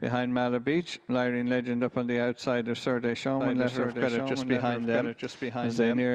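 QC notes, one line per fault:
3.40 s to end, doubled audio track: a second copy of the sound kicks in abruptly, running about a second behind and a few dB quieter, full-band with no decay or room colour, most likely from a slower capture path picking it up twice.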